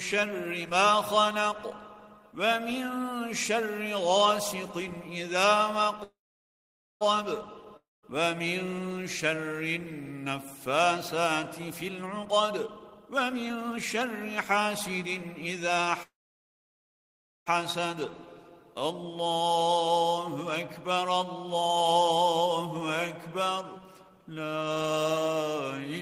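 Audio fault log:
6.03–7.03 s, call audio freeze: packets were likely held up and the jitter buffer emptied. The last sound fades into about 0.87 s of silence, then resumes with nothing lost, only 0.97 s late.
7.77–8.05 s, long network dropout: audio likely stopped arriving. The last sound trails off into about 0.19 s of silence, and the sound then returns with about 0.26 s missing.
11.72–15.86 s, jitter buffer speed-up: the buffer held excess audio, so the receiver cut short pitch-period pieces, about 0.7 s in total. The sound runs at 119% speed, hurried but unchanged in pitch.
16.03–17.48 s, call audio freeze: packets were likely held up and the jitter buffer ran dry. The sound fades into about 1.35 s of silence and resumes 1.44 s late, with nothing lost.
19.05–21.77 s, jitter buffer speed-up: the buffer trimmed short pitch-period pieces, about 0.2 s in total. The sound plays at 109% speed, slightly rushed but with unchanged pitch.
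23.81–25.05 s, jitter buffer speed-up: short pitch-period pieces, about 0.15 s in total, were removed to reduce buffered delay. The sound runs at 110% speed, mildly hurried with unchanged pitch.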